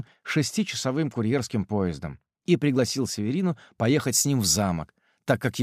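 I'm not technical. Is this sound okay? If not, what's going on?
No. From about 4.0 seconds to the end, the sound turns thin, harsh and overly bright, with hissy s-like edges. This is pre-emphasis left on: the treble was boosted, like FM radio does before sending, but never turned back down afterward.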